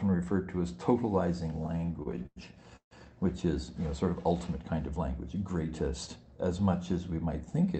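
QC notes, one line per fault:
1.63–2.38 s, repeated stalls (stutter): the audio halts eleven times, the longest wait 100 ms, with roughly a third of this span held over by stretching the preceding sound. Late-arriving packets kept draining the jitter buffer, so playback drags and judders while losing nothing.
2.76–2.93 s, call audio freeze: the sound hangs, continues as a fading tail, then drops to about 90 ms of silence before resuming where it left off. A brief hold-up of packets likely emptied the buffer, inserting roughly 150 ms of delay.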